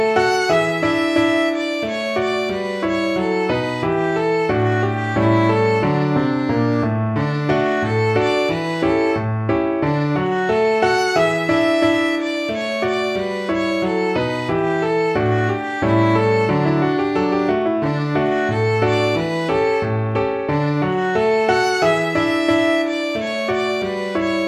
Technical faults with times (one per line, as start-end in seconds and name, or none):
0.11-24.47 clock slip clicks